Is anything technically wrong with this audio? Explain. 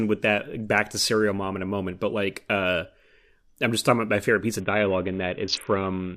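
Yes. A Bluetooth SBC bit pool drop begins at 4.6 s and runs to the end of the clip at 6.16 s. The link appears to have come under pressure, and the encoder lowered its bit pool to keep the audio flowing. The sound fits a fall from around 28 to about 5, which points to roughly 54 kbps. At that rate the highest sub-bands get almost no bits and the rest are coarsely quantised, so the speech turns suddenly dull and gritty.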